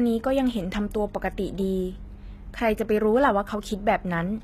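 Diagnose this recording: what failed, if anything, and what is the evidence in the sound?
HE-AAC compression is the likely culprit, heard throughout the speech at the codec stage. The damage is plainly audible: s sounds and other sibilant detail come out gritty and metallic rather than crisp, and nothing is present above 14.9 kHz. The treble is not the original signal. The encoder kept only the lower spectrum and rebuilt the top by copying lower bands upward under a coarse envelope, so harmonics fail to line up across the crossover. This fits HE-AAC v2 at around 20 kbps.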